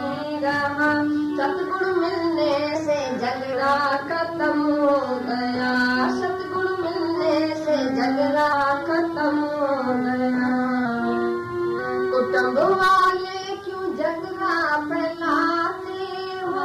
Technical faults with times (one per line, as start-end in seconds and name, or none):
2.75-3.53 drift correction step
7.16-8.53 drift correction step
10.85-11.79 drift correction step